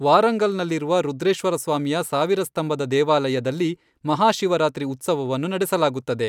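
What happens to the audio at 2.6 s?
Nothing goes wrong at 2.6 s; the speech continues intact through that moment with no dropout, click or distortion.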